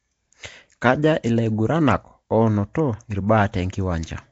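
Throughout, likely Nellymoser compression starves weak bands of bits, filling them with noise, so the speech sounds rough, hissy and underwater, with nothing above 7.8 kHz.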